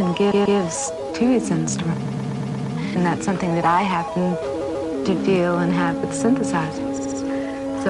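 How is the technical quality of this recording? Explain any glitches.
The recording is marred by stutters from repeated frames at 0.30 to 0.58 s, 2.05 to 2.74 s, 4.60 to 4.88 s and 6.97 to 7.18 s. A short block of compressed audio (139, 116, 139 and 70 ms) is played again two, six, two and three extra times. Unlike a dropout, nothing goes missing. Each repeat makes the sound last longer.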